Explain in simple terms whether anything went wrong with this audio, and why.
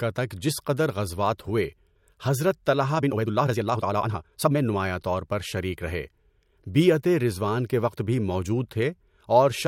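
Something did go wrong: from 2.94 to 4.58 s there's a time-stretched section where the speech suddenly rushes along at about 1.84 times normal pace, while the pitch stays put. Likely some software squeezed that stretch by dropping small slices of audio.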